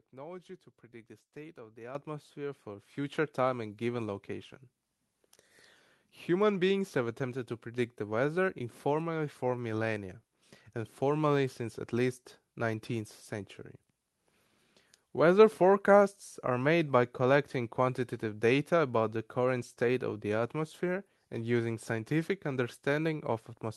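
Microphone volume stepped up, at 1.95 s and again at 2.97 s: the call software judged the input too quiet and raised the microphone's gain in two abrupt jumps, first by about 10 dB and then by about 4 dB. At each step the voice and the room noise behind it leap louder together, with no fade, through a call path whose top end stops near 12 kHz.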